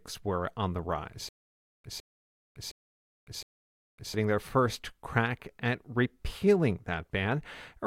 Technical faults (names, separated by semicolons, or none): stutter with silent gaps